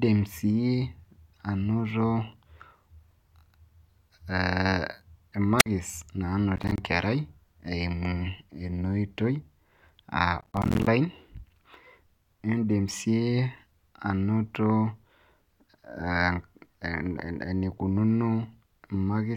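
At 5.58 s there's a wireless microphone squelch dropout, running to about 5.66 s. The transmitter's signal sags far enough that the receiver's squelch cuts the output, so you get a quick swell of hiss, then a hole of roughly 52 ms of near silence, before the speech comes back. It's short.

Then there's processor overload crackle, first from 6.56 to 6.78 s and again, longer, from 10.41 to 10.87 s. Here the processing couldn't keep up with its audio deadlines, so chunk after chunk came out as little slivers of silence with hard edges. The spacing of the ticks suggests buffers of around 10 ms. That's something like ten misses in the first burst and twenty or so in the second. It comes across as gritty tearing laid over the speech, and it stops as soon as the load eases.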